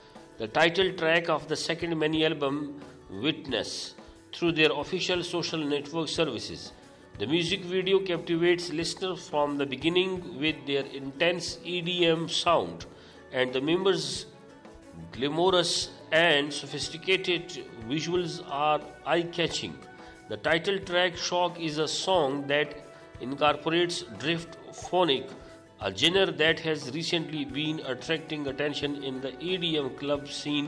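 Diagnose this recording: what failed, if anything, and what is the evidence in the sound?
Nothing stood out on listening that would point to a failure at any stage of the chain.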